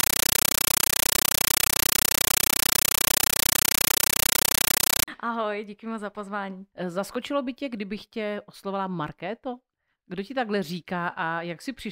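A Dolby Digital (AC-3) stream was passed to the output as if it were ordinary PCM samples instead of being decoded, a compressed stream played as audio, from 0.00 to 5.08 s. Each encoded frame comes out as a roughly 9.3 ms burst of noise followed by silent padding, repeating 31.25 times a second, which fits a 448 kbps AC-3 stream. The result is very loud, harsh chattering static that completely replaces the speech.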